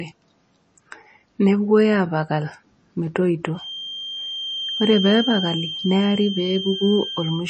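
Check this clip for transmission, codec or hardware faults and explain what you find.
Two faults are audible. Throughout, the speech sounds watery, with swirling s sounds and nothing above 8.3 kHz, likely MP3 compression at a low bitrate near 32 kbps. Unlike a plain low-pass filter, it has lines flickering frame to frame. From 3.51 s to the end, a steady 3.2 kHz feedback whistle, swelling and fading slowly, sits roughly 10 dB below the speech. It is likely a loudspeaker-to-microphone loop held at the brink, and its single tone doesn't follow the speech the way codec artefacts do.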